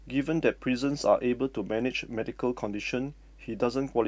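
A speech recording carries mains hum from start to finish. A steady low tone sits under the voice at 50 Hz, roughly 25 dB below the speech. It points to power-line interference, from a ground loop or a transformer near the recording chain.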